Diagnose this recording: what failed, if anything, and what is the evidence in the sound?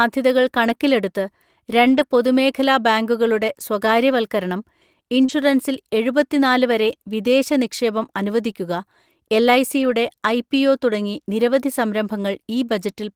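Network stage, lost packets rebuilt from error correction: 0.67–0.69, 1.85–2.03, 3.83–3.85, 5.28–5.30, 7.44–7.46 and 9.78–9.92 s. The next packet's low-bitrate copy filled each hole, so nothing drops out but those spans turn rough and noisy. The spectrogram shows grainier, blurred detail, with an unbroken waveform.

Also network, short concealed packet loss: about 40 ms at 5.25–5.30 s never arrived in time. The decoder continued the preceding sound and then blended back, leaving a brief smear or wobble. On a spectrogram the harmonics hold flat or become a noise patch.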